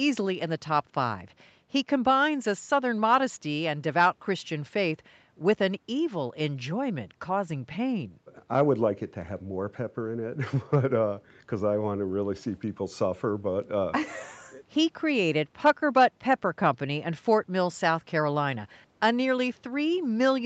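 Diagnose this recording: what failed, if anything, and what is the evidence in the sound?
Nothing failed in this speech recording, and no stage of the chain shows a fault. The only thing to hear of the call path is that the audio stops at about 8 kHz, the expected band limit of the call's microphone processing and Opus coding, here running at about 48 kbps.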